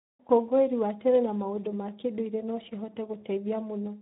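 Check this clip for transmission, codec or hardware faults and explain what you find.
The whole clip carries Speex codec damage, plainly audible from start to finish. Speex is a CELP coder that rebuilds speech from a spectral-envelope filter driven by a coded excitation. Here the excitation is starved of bits, which fits a low setting of around 11 kbps, so the speech sounds hoarse and noisy. On a spectrogram, harmonics look smeared and grainy, and any content above 4 kHz appears as diffuse noise rather than structured detail.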